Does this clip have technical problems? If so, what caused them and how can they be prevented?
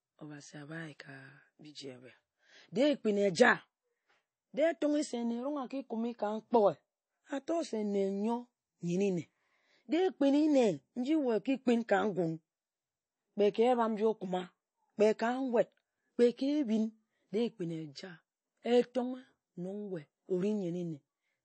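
Yes. Throughout the speech there's a watery, swirly texture, and nothing survives above 8.3 kHz, which points to MP3 compression, likely at a starved bitrate around 32 kbps. The encoder chops the treble and lets weak frequency lines flicker on and off between frames. To prevent it, export at a higher bitrate or keep a lossless master.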